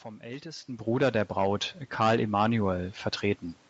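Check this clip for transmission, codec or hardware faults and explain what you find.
The one fault here is automatic gain rising, running from about 0.65 s to 3.51 s. Over those nearly three seconds the level climbs by about 4 dB, slowly. The automatic gain control judged the input too quiet and kept nudging its gain upward, so the speech and the room noise behind it swell together instead of the speech alone getting louder. That shared lift in the background is what sets it apart from the talker moving, around 0.5 s.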